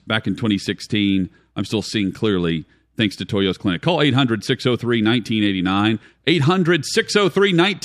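No technical faults can be heard in this recording.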